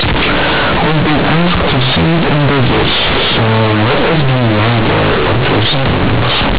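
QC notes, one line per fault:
Throughout, companded audio read as linear: A-law bytes play as 8-bit samples without expansion, so each sign change swings half the range and quiet speech equals loud, heard as harsh buzz with noisy pauses. The waveform is bent out of shape, and the spectrogram shows broadband smear up to 4 kHz.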